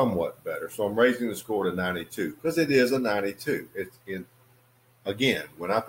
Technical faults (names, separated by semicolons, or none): none